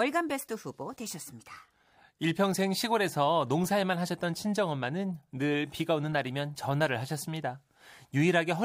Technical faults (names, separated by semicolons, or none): none